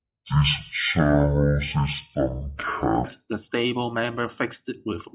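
Speech samples are clocked out at the wrong sample rate from the start to 3.04 s, with no conversion between the recording rate and the playback rate. The result runs at half speed and an octave low (12 semitones down), which fits 16 kHz audio being played at 8 kHz. Over that stretch the speech sounds slow, deep and drawn out, until normal pitch and pace return at "the stable member fixed".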